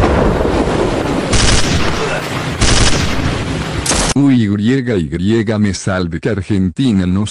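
The audio carries clock slip clicks from 0.21 to 7.25 s: faint, evenly spaced ticks about seven times a second. Their steady rate sets them apart from random crackle, pointing likely to unsynchronised clocks around 150 ppm apart, each slip dropping or repeating one sample.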